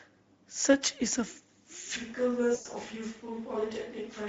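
Throughout, the speech carries plainly audible Speex codec damage: a hoarse, noisy CELP texture with thin excitation, consistent with a mid-quality setting of roughly 17 kbps.

From 1.97 s to the end, the sound turns suddenly roomy and hollow, loses bass, drops about 5 dB and gains background noise. This is likely a switch to a distant microphone.

Between 2.55 and 2.68 s, VoIP packet loss concealed by the speech codec stretches the sound into a fading buzzy tone or coloured noise over about 100 ms, which fits five lost 20 ms frames.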